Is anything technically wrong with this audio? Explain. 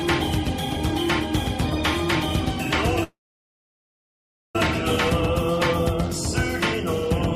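Yes, there's a call audio freeze from 3.03 to 4.56 s. The sound stops moving forward, tails off as a brief fading buzz or hiss, then sits silent for roughly 1.4 s before picking up exactly where it left off. That's likely packets getting held up in transit so the jitter buffer runs dry, and the receiver stretches the last bit of sound until data arrives again. Nothing is lost, but everything after it runs about 1.5 s late.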